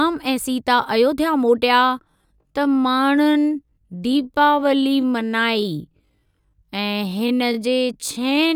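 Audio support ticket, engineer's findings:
Time-stretched section, 1.71 s to end: speech abruptly slows to about 0.59x with pitch held, dragging. Likely stretch software repeating short segments. Spectrogram: harmonics stay at the same frequencies but stretch horizontally; waveform shows duplicated grain patterns.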